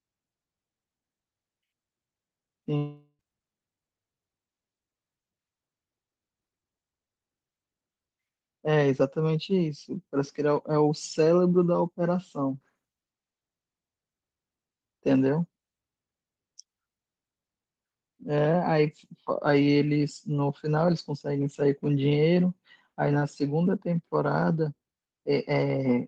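From 2.77 s to 3.21 s the speech breaks off. The last sound stretches into a fading buzz for about 0.42 s and gives way to a brief silence before speech resumes, with roughly 0.42 s lost. This is likely a long network dropout.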